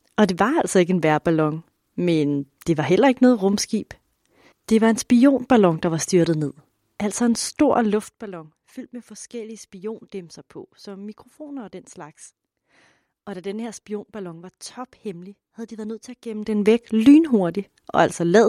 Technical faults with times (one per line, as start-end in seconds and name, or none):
none